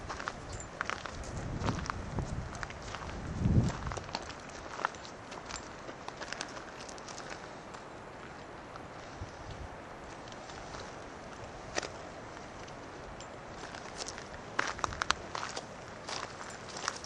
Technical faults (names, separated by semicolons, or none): none